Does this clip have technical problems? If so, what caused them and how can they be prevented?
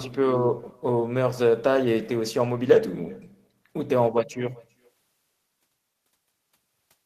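Yes. Throughout the clip there is echo with no canceller. The far end played the call on a loudspeaker, and its microphone sent it straight back. The speech returns roughly 0.4 s later as a faint, thin copy, about 28 dB down. Enabling acoustic echo cancellation at the far end, or having that listener wear headphones, prevents it.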